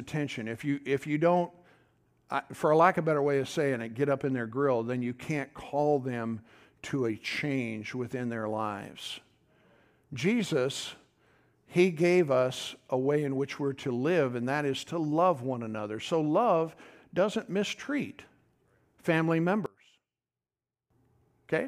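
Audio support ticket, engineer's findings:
Likely one channel inverted upstream of mono fold-down, 19.66–20.90 s: reversed polarity cancels the shared centre content, so the speech drops about 24 dB and leaves only a faint residue.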